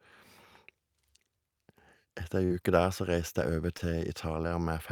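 At 2.45 s the speech briefly smears where short concealed packet loss occurs: about 40 ms of audio failed to arrive in time, and the receiver bridged the gap with roughly 44 ms of synthesised continuation before cross-fading back to real signal, ending by 2.52 s. A second, shorter instance follows at 3.78 s, where about 20 ms went missing and 15 ms was filled. Both are heard as a momentary wobble or smudge rather than silence.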